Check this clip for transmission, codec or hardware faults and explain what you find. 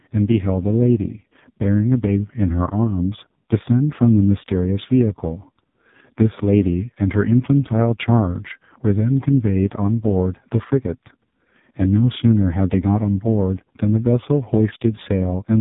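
One codec fault runs through the whole speech recording. AMR narrowband mobile codec, throughout: nothing passes above 3.8 kHz, and heavy vocal-tract modelling makes the voice buzzy and synthetic. The damage points to AMR-NB's lowest mode, around 4.75 kbps. Plain telephone band-limiting would sound muffled but never buzzy like this.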